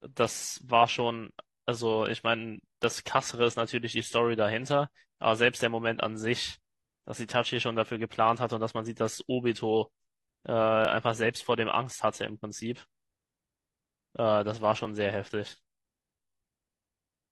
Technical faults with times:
2.84-2.87 overlap between stream segments
10.85-10.88 overlap between stream segments
14.85-14.89 overlap between stream segments

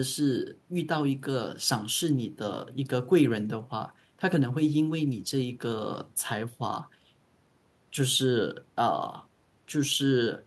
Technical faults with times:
none

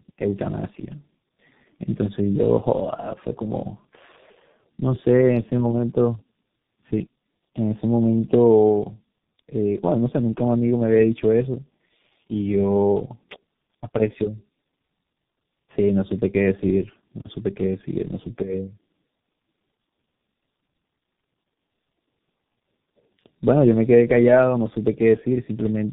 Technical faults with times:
0.00-25.93 tandem speech coding

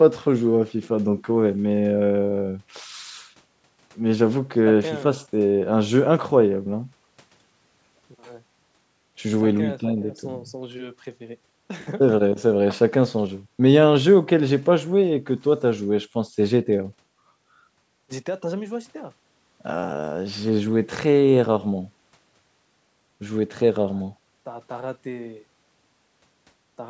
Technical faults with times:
none

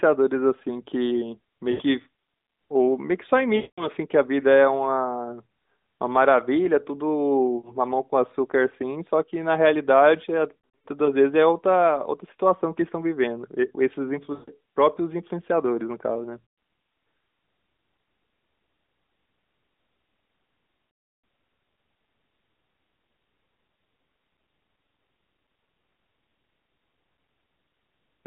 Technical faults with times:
1.72-1.82 lost AMR speech frames
3.56-3.88 lost AMR speech frames
7.58-7.72 lost AMR speech frames
10.60-10.87 lost AMR speech frames
14.34-14.50 lost AMR speech frames
16.46-16.58 lost AMR speech frames
20.90-21.24 lost AMR speech frames

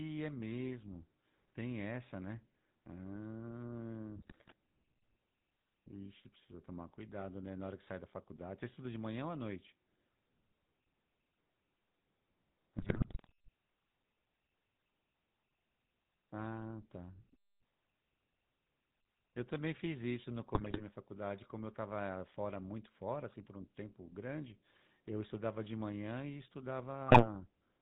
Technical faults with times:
0.00-27.82 GSM full-rate codec
4.16-4.53 GSM bit errors
12.78-13.32 GSM bit errors
20.54-20.82 GSM bit errors
27.08-27.27 GSM bit errors

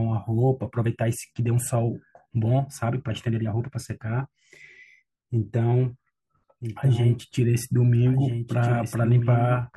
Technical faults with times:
6.61-9.77 doubled audio track

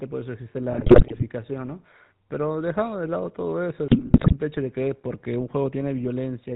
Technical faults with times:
0.00-6.56 GSM full-rate codec
0.72-1.23 GSM bit errors
3.88-4.33 GSM bit errors

